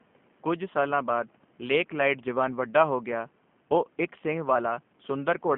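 Speech, and the whole thing has been through a G.729 codec, which you can hear plainly from start to finish. The band sits roughly between 150 Hz and 3.5 kHz, so it's thin at the bottom and dull on top. The voice comes out a bit rough and synthetic because the codec rebuilds it from a filter model plus a few pulses per frame, a sound that fits an 8 kbit/s stream. The room noise, about 35 dB under the speech, picks up a warble too.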